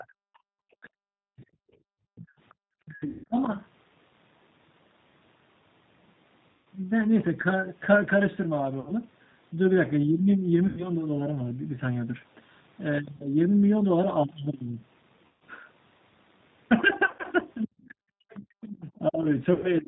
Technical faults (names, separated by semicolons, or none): G.729 codec; speech suppressed in double talk; other side's voice leaking through; background gated by the echo canceller; VoIP packet loss concealed by the speech codec